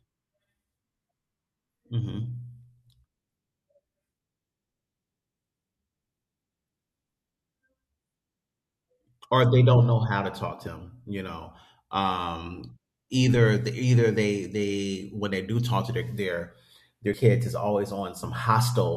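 Speech, interrupted twice by damaged data in a compressed stream. The faults fall at 10.67 s and 17.14 s. Each is a very brief blip, only a few milliseconds long. At those points part of the compressed data has been corrupted. The decoder cannot read the affected frame properly. It loses its place and hunts for the next valid frame header. That momentary loss of sync produces the short blip.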